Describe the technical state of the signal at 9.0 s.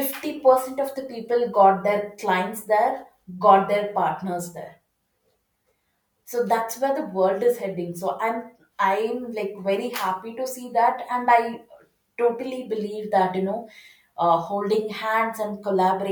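At 9.0 s the speech signal is intact, with no audible dropout, distortion, glitch or other fault at that point.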